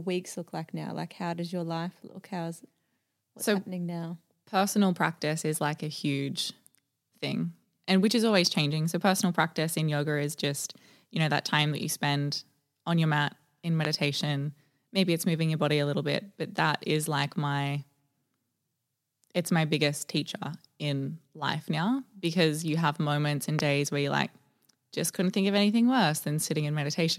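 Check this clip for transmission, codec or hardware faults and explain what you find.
Two loud pops interrupt the speech, one at 13.85 to 13.87 s and a second at 23.59 to 23.61 s, each a single pop standing roughly 20 dB and 15 dB above the surrounding signal. The cause is likely an electrical step or pulse from a plug, switch, static or driver glitch, which the downstream circuitry shapes into a brief click. The speech continues underneath. On a waveform each pop is a narrow spike; on a spectrogram, a thin vertical broadband stripe.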